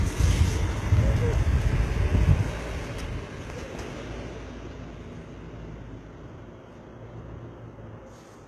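HE-AAC compression runs through the whole recording: the treble sounds rebuilt rather than captured, gritty and metallic, with nothing above about 12.3 kHz. This likely comes from spectral band replication copying lower bands upward, which fits a very low bitrate around 16 kbps.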